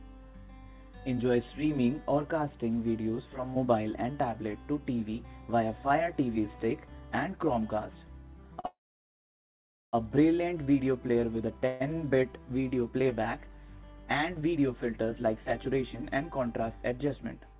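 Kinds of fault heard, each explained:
Short stall from a late packet: at 8.60 s one packet failed to arrive on time and the jitter buffer emptied, so the receiver held the last sound for about 38 ms instead of dropping anything. Once the packet turned up, playback resumed from the same point. The result is a brief drawn-out moment, and it runs straight into the longer freeze that follows.
Call audio freeze: from 8.66 to 9.95 s, and again from 11.67 to 11.82 s, the buffer had nothing to play, likely because packets were held up in transit. In the first, the receiver briefly continued the last sound before it faded to near silence for about 1.19 s, adding roughly 1.27 s of gap. The second is a shorter 132 ms stretch of decaying fill with no true silence. Nothing is lost; playback simply resumes late.
Jitter buffer speed-up: from 15.46 to 17.56 s the buffer was holding more audio than it wanted, so the receiver repeatedly trimmed short pitch-period-sized slices to shrink the delay. 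Around a tenth of a second is cut in total, making this stretch play about 5% fast while the pitch stays the same. It comes across as slightly hurried, all on top of a narrowband call path with nothing above 4 kHz.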